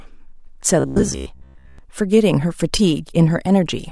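From about 0.80 s to 1.79 s the speech goes robotic, a metallic buzz at 66.9 Hz that still tracks the words loosely. That's robotic sound from repeated short buffers, likely from audio arriving too slowly, so a tiny chunk gets replayed over and over, roughly 70% of the time.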